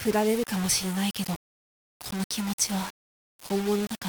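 From start to finish there's a coarse, grainy distortion riding on everything, noise sitting only about 15 dB under the signal, and it shifts with the sound itself. That's likely low bit depth without dither, which fits around 4 bits of plain rounding, so quiet passages crumble and sputter.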